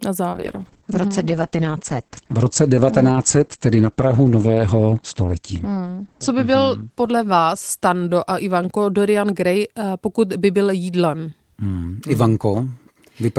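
From 0.35 s the speech turns rough and muffled, with a watery, coarse texture, and it stays degraded for about 5 s at its worst before recovering by 9.96 s, just before "pokud by byl jídlem". This is a call bitrate drop: the encoder's rate fell from 40 kbps to 9 kbps, so it coded the signal far more coarsely and narrowed the audio band from 20 kHz to 8 kHz, removing the upper frequencies.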